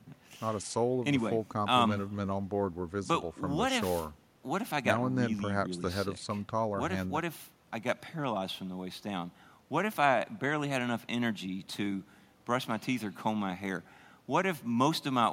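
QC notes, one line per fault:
No fault to note.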